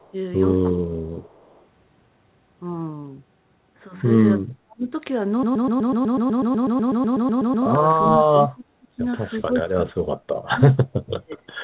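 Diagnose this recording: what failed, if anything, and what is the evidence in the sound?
Echo leak at 0.00–0.12 s and 1.24–1.65 s: a faint copy of the speech, about 35 dB down and 386 ms late, likely residual echo the canceller missed.

Speech suppressed in double talk at 0.72–1.23, 4.42–4.93, 8.02–9.03, 9.41–10.87 and 11.07–11.48 s: the speech dips by roughly 30–35 dB, likely because the canceller ducked both talkers.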